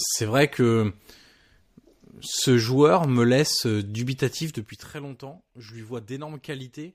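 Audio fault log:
4.41–4.94 s, zipper noise: the speech gets pulled down by roughly 15 dB over about half a second, but the drop happens in a staircase of tiny jumps, around fifty a second, instead of a clean glide. Each jump is a small discontinuity in the waveform, so you hear a fast ticking, zippy buzz riding on the voice while the level falls. It's what you get when gain updates land once per block with no smoothing in between.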